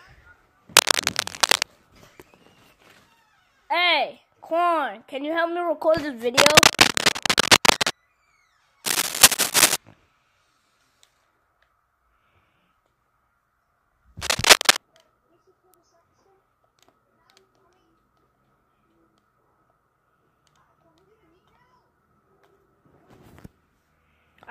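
Scratching and rustling sits over the sound in four bursts: 0.75 to 1.64 s, 6.37 to 7.91 s, 8.84 to 9.76 s, and 14.22 to 14.78 s. Each is dense and uneven, roughly 5 dB louder than the signal beneath it. This is cable scratch noise. The likely cause is a worn cable, connector or control being moved, so that its contact resistance jumps around rapidly and adds bursts of crackle while it shifts.

At 15.74 s there is a single sharp tick, broadband and unrelated to the surrounding material, peaking at about -25 dBFS. It is a bit error spike. A flipped bit in memory or on a digital link pushed the waveform by a power of two for what sounds like only a sample or two before it snapped back. That makes it a click rather than a longer disturbance.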